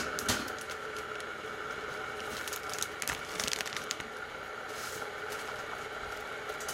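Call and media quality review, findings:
DAB burbling at 1.78–1.97 s, 3.76–4.01 s and 5.46–5.81 s: short noise blips over the sound. Weak DAB reception is letting bit errors slip past error correction into the MP2 stream, so corrupted samples put noise blips in single sub-bands and corrupted scale factors make sub-bands jump in level for up to a frame.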